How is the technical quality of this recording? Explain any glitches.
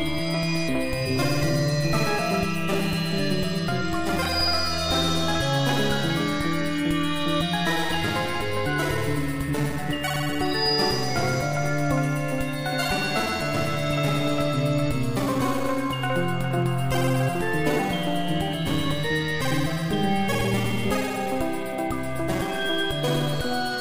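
No technical faults are audible.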